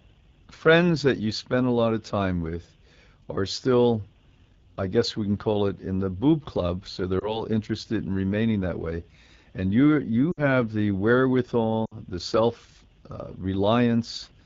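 All the way through, the speech has that rough, raspy edge of the AMR wideband (HD Voice) codec at 8.85 kbit/s, one of its lowest rates. The pulse-driven vocal tract model is starved of bits, and the top band above 6.4 kHz is just shaped noise.

On top of that there are lost AMR speech frames. At 7.20 s a brief dip or warble lasts until about 7.43 s, which fits a single 20 ms frame being concealed. At 10.31 s and again at 11.85 s the gaps are longer, consistent with about 60 ms of missing audio. In these longer gaps the decoder stretches the last good pitch and tract settings and fades them to near silence within two frames, and the speech comes back a bit weak or rough.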